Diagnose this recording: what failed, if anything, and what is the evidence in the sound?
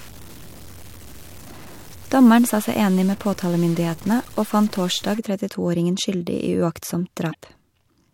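Distortion from 0.00 to 5.19 s, with noise filling the pauses, is likely a stuck bit at the converter, offsetting about half the sample values.

At 7.30 to 7.35 s a brief glitch marks damaged data in the compressed stream: the codec decoder misread corrupted frames there and lost sync.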